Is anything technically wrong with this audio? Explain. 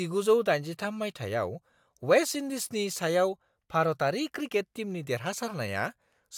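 No, nothing technically wrong turns up here; this speech recording comes through without any faults to point at.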